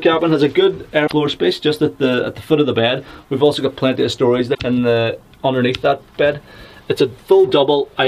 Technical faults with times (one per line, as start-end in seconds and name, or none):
1.03-1.13 damaged data in a compressed stream
3.01-3.71 CD scratch ticks
4.51-4.60 damaged data in a compressed stream